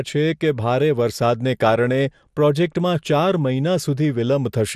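A speech recording with MP2 compression damage running from start to finish. The sound is dull and muffled, with the top end missing. A gurgling, granular roughness sits on the speech. The upper frequencies flicker in and out as the encoder runs short of bits and drops whole sub-bands. The bands that remain are coarsely quantised, which adds the grain. The damage is plainly audible. It likely comes from MPEG Layer II encoding at a low bitrate, which fits roughly 80 kbps.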